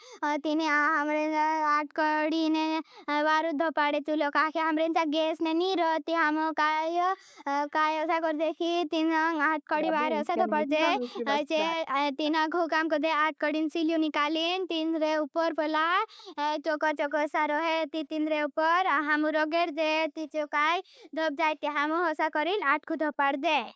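Background gated by the echo canceller, 7.11 to 7.22 s: while the far-end loudspeaker was active, the canceller clamped the microphone, pulling the room sound down by about 40 dB for a brief instant before it recovered.

Speech suppressed in double talk, 9.83 to 11.08 s, 11.42 to 11.9 s and 12.22 to 12.28 s: the talker's sound sags, mildly in the first stretch, then drops out almost completely in short pieces in the later two. This is likely the canceller failing to tell near-end talk from loudspeaker echo while both sides spoke, and turning everything down.

Echo leak, 16.17 to 16.24 s: a faint scrap of delayed sound, trailing the original by 151 ms and sitting far below the main level, slips through, likely residue the canceller on the loudspeaker side failed to remove from its loudspeaker pickup.

Background gated by the echo canceller again, 20.71 to 20.92 s: the room tone is cut by about 40 dB for a fifth of a second and then returns, heard against the call processing's band limit with nothing above 8 kHz.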